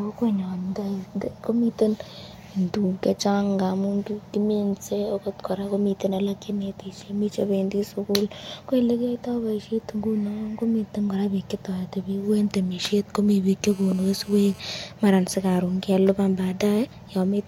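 Speech, interrupted from 13.64 to 14.60 s by GSM phone buzz: a hard, raspy tone at about 217 Hz, sitting about 24 dB below the speech and unaffected by it. A nearby 2G phone on a call transmits bursts at that rate, and the audio circuit rectifies them. Mains hum sits at 50 or 60 Hz and sounds smoother. This buzz is higher, harsh with harmonics, and holds steady throughout.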